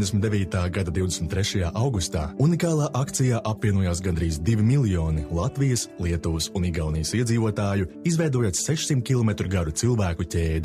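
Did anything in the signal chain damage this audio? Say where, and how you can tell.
No, nothing in the signal chain stood out as damaging this audio on listening.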